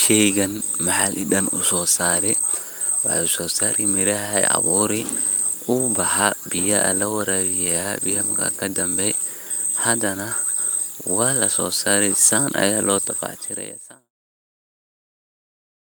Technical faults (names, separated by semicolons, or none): none